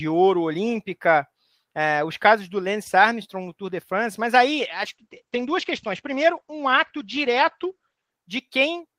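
From 4.56 s to 8.19 s there is a call bitrate drop. The encoder was starved of bits, which fits a fall from 32 kbps to 11 kbps. The speech turns rough and watery. Its bandwidth shrinks from 20 kHz to 8 kHz, so it sounds muffled.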